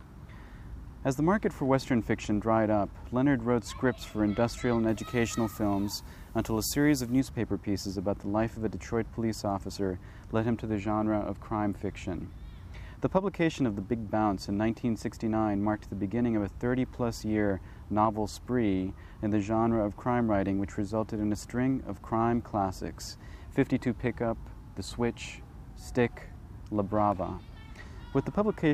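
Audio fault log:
4.89–7.20 s pre-emphasis left on: the treble boost was never undone, fitting a 50 µs FM curve, so about 11 dB extra at 10 kHz makes the sound thin, bright and sibilant.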